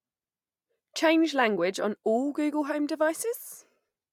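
No technical faults can be heard anywhere in this speech.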